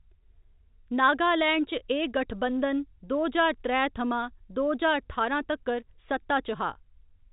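No technical faults are audible in this speech clip, which carries the narrow band of G.711 telephone coding with nothing above about 3.8 kHz, consistent with a 64 kbps A-law line, and the faint level-following quantisation noise of that format stays low under the signal.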